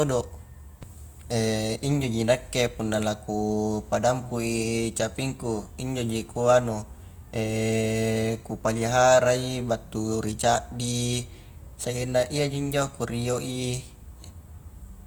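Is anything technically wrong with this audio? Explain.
Yes. Clock drift buffer slips from 2.04 to 13.33 s: clicks recur every 3.77 s, likely mismatched device clocks slipping a few samples, unlike irregular random dropouts.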